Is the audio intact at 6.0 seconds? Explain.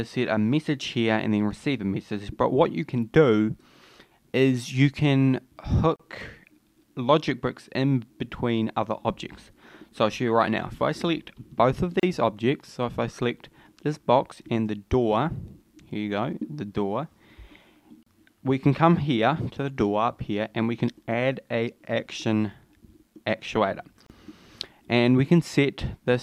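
No. A gap at a join of encoded pieces runs from 5.96 to 6.00 s, about 35 ms. Separately encoded pieces were joined untrimmed, so start-up delay and last-frame padding remain, briefly breaking continuous sound before it resumes where it stopped.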